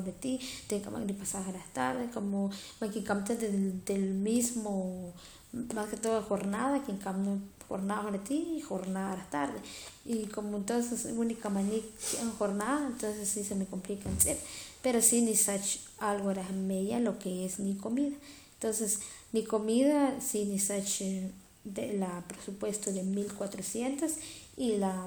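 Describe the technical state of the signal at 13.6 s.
At 13.6 s the speech signal is intact, with no audible fault at that moment.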